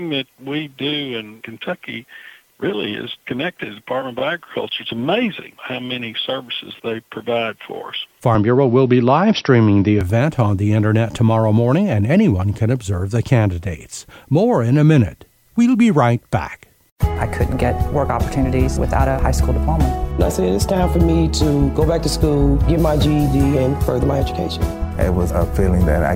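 Repeated frames at 4.18 to 4.21 s: a single 23.2 ms block plays twice, causing a brief stutter and adding 23.2 ms.

Input switched to a poorer device, from 8.35 to 10.01 s: the sound abruptly dulls, losing everything above 5.8 kHz, with new noise roughly 40 dB below the signal. There is no gap and no level jump, which likely points to the recording changing over to a narrower-band microphone.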